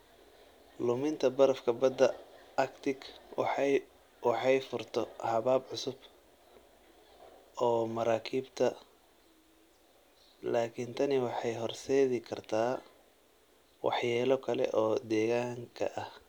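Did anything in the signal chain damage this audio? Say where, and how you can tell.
No, nothing in the chain has damaged this speech.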